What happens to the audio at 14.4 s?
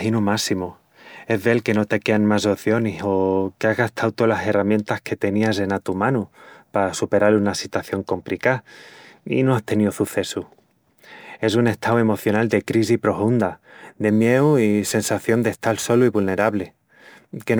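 From 14.08 s to the end, crude rate conversion, likely 44.1 to 48 kHz by repeating samples, adds a gritty, inharmonic fizz roughly 25 dB below the speech.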